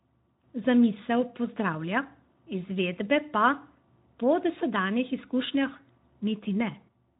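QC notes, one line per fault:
No faults to note for this speech clip, so there are no per-fault lines.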